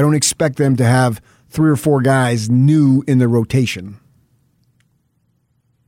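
There are no technical faults to describe at any point in the speech.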